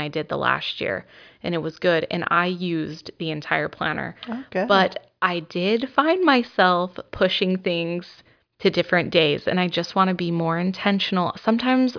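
No technical faults are audible anywhere in the speech.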